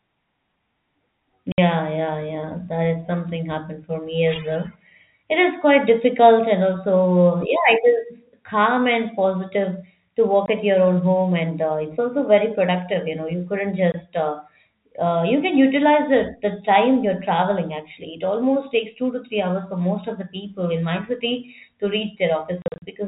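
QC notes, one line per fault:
1.52 to 1.58 s, 10.46 s, 13.92 s, 22.62 to 22.82 s: packet loss filled with silence. Holes last 60, 20, 20 ms, then 140 ms scattered across 200 ms (longest gap 40 ms), which fits 20 ms packets. Hard-edged holes show as flat waveform gaps with vertical broadband spectrogram lines.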